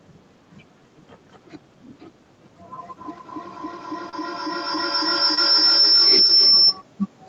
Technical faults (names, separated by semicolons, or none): feedback howl; short concealed packet loss